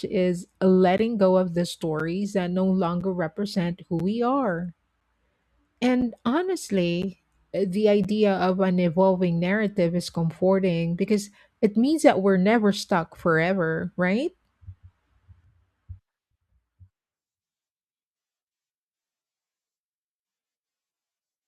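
Short holes of silence cut into the speech at 0.98, 2.00, 3.01, 4.00, 6.01, 7.02 and 8.04 seconds. This is a gap between stream segments. The segments are one second long, and their time stamps leave a small space between them. The player fills that space with silence. Each hole lasts roughly 8 to 12 milliseconds and has hard edges. The first falls just before "go of the". Another sits between "that no" and "represent who we are". The last comes just before "of an evolving narrative".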